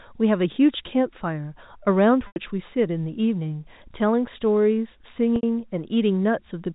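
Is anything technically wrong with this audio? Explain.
Yes. Packet loss with pitch repetition occurs twice, at 2.27 s for 90 ms and at 5.36 s for 70 ms. The receiver replays the last pitch period, which briefly holds a buzzy tone, fades it to silence, then cross-fades back. The gap lengths fit 10 ms packets. The telephone-band G.711 coding itself is intact.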